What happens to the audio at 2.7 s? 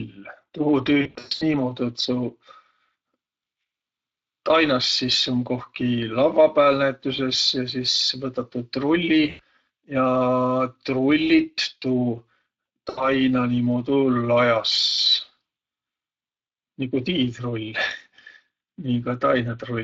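At 2.7 s the speech carries Speex codec damage, present throughout: coarse CELP excitation at a mid rate near 20 kbps sounds hoarse and noisy, with blurred harmonics on a spectrogram.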